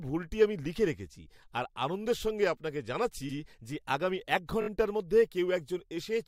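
At 3.28 s an 85 ms stretch of speech plays twice, and at 4.61 s a 21 ms block plays four times, a stutter of repeated frames. Identical compressed frames recur. This lengthens the audio rather than losing any of it, unlike a dropout.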